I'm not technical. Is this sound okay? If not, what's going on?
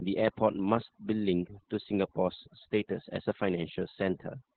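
No. Two problems run through the whole clip, from start to finish.

The first is overdone noise removal. A cleanup tool was pushed too hard. It silenced any sliver of sound it mistook for background hiss, and quiet parts of the speech went with it. So the background in the gaps drops away and breaks up into twinkling specks.

The second is Opus voice compression at a very low setting. It used the speech-only mode of the Opus codec, which squeezes the voice hard to save space. It cut away everything above roughly telephone range, so the speech sounds muffled and boxy. It also coded the voice coarsely, which is why it comes across hoarse and a little robotic. The damage here is heavy, not subtle.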